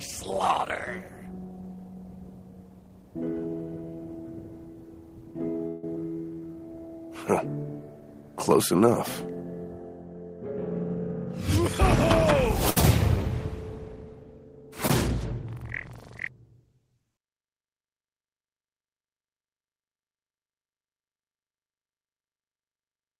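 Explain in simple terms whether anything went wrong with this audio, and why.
Several things went wrong, all typical of audio sent live over a network.

From 5.67 to 5.84 s the sound stops moving forward and the last moment is held as a fading buzz or hiss for about 157 ms, then carries on with nothing lost. This is a call audio freeze, likely caused by packets held up in transit, leaving the receiver's jitter buffer with nothing to play.

At 5.95 s and again at 12.82 s there is a tiny smear. Each is a short concealed packet loss. About 50 ms and 40 ms of audio never arrived, and the receiver papered over the holes with a few milliseconds of guessed sound.

From 6.34 to 6.54 s the sound drags, playing at 80% speed with the pitch unchanged. This is a jitter buffer slow-down. The receiver repeated tiny slices to add 49 ms and rebuild its reserve.

From 10.95 to 12.55 s things feel slightly rushed, at 107% speed with the pitch unchanged. 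This is a jitter buffer speed-up. Too much audio had piled up, so the receiver trimmed about a seventh of a second in small pieces.

From 12.70 to 12.77 s one sound is held too long with a faint buzz or dip. This is a short stall from a late packet. The receiver stretched the sound for 66 ms while waiting, then resumed where it left off.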